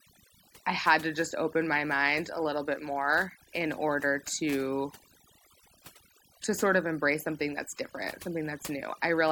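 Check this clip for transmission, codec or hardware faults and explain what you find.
One processing fault runs through the whole recording rather than any transmission or hardware error. Overdone noise removal, present throughout: a noise reducer set too aggressively cuts individual frequency bands whenever they approach its noise estimate, taking quieter parts of the speech with them. The background drops and breaks up into twinkling, warbling specks.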